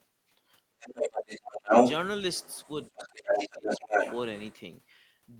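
From 0.77 to 1.27 s the speech sags by roughly 25 dB. This is speech suppressed in double talk, likely because the echo canceller could not tell the near talker from loudspeaker echo and turned both down. On a spectrogram the harmonics and upper bands fade to a pale gap. In the waveform the envelope collapses while energy is still present at a much lower level. Further dips follow at 1.51 to 1.72 s, about 30 dB deep, and 2.90 to 3.98 s, about 25 dB.

Overlapping these, from 0.84 to 1.92 s, a second voice leaks through, roughly 10 dB louder than the talker. This is the other side's voice leaking through, likely residual echo the canceller failed to remove from the microphone. It returns faintly, about 15 dB below the speech, at 2.36 to 3.08 s, then at roughly 5 dB above it from 3.29 to 4.55 s. On a spectrogram it shows as a separate harmonic pattern laid over the main one, and in the waveform as bursts that do not follow the talker's own envelope.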